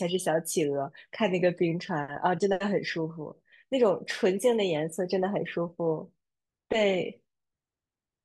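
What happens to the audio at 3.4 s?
Nothing goes wrong at 3.4 s; the speech carries on cleanly through that moment with no dropout, click or distortion.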